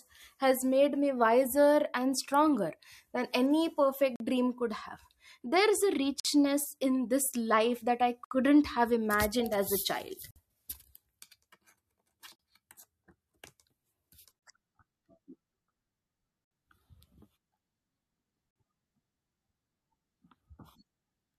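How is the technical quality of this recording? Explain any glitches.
Regular dropouts spoil the speech, caused by a gap between stream segments at 4.16, 6.20, 8.25, 10.31, 12.36, 14.39, 16.45 and 18.51 s, every 2 s. Neighbouring segments' timestamps leave 33 to 66 ms uncovered, and the player fills that with silence, so the speech stops dead and resumes, first right after "and stronger than any". No audio is lost. A waveform shows flat, sharp-edged holes, and a spectrogram shows thin empty vertical columns.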